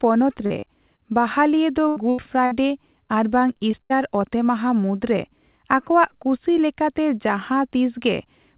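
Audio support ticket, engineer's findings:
Short concealed packet loss, 0.46–0.52 s, 0.60–0.64 s, 0.96–1.00 s. Brief smears. Jitter buffer/decoder concealment: about 20–40 ms of late packets patched by extending the preceding sound, then crossfaded back into received audio.

Burst of packet loss, 1.88–1.98 s, 2.10–2.20 s, 2.46–2.53 s. Held buzz or fading hiss, then a jump ahead. Receiver concealment: consecutive packets lost, 60–80 ms each time, last sound continued and attenuated, missing span dropped.

Repeated packet loss (robotic sound), 3.07–3.92 s, ending just before "ᱚᱛᱮᱢᱟᱦᱟ ᱢᱩᱫᱨᱮ ᱟᱠᱚᱣᱟᱜ ᱠᱩᱥᱤ". Choppy speech. Network/jitter buffer: five closely spaced gaps, longest 72 ms, concealing about a fifth of the stretch. The band-limit at 4 kHz fits a narrowband G.711 A-law call at 64 kbps.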